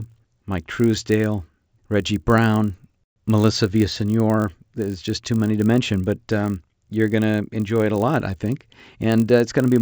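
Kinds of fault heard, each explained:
Resampler restarted on every block: throughout the speech, the conversion from 16 kHz up to 48 kHz was done on each 20 ms block separately, with the converter's filter history discarded at every boundary. Each block edge was therefore interpolated against missing or wrong neighbouring samples, leaving a small discontinuity every 20 ms. These errors repeat at 50 Hz and merge into a low buzz that rides along with the talking and drops away in the pauses.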